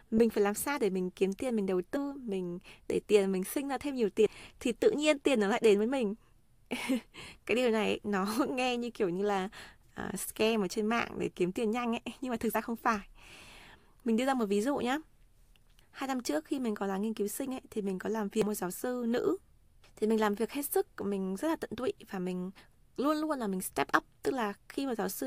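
Brief glitches from damaged data in a compressed stream fall at 1.95 s after "kiếm tiền mình đầu", at 4.25 s between "sinh ra thêm nhiều" and "thì tự nhiên tiền", at 12.54 s, and at 18.42 s before "một giáo sư nữ". At each point the decoder misreads corrupted frames and resyncs.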